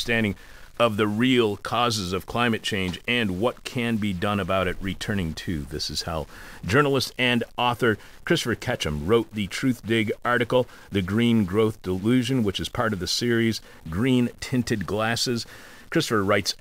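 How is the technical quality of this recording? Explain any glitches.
The recording carries constant low-level digital distortion. Throughout, a stuck bit is likely, offsetting many samples by a step of about -45 dBFS. The speech sounds buzzy and harsh, and the pauses fill with hiss.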